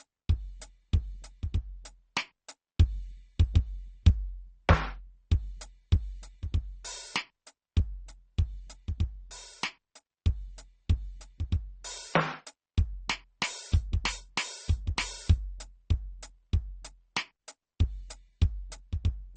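It's a music clip, and the whole thing carries the smeared, doubled-up grit you get from transcoding between lossy codecs. Nothing survives above about 8.8 kHz, and the artefacts of two different coders seem layered on top of each other. That points to a low-rate MP3, somewhere near 33 kbit/s, that was likely re-encoded to Opus at around 32 kbit/s. The second encoder wasted its bits chasing the first one's damage and then added its own.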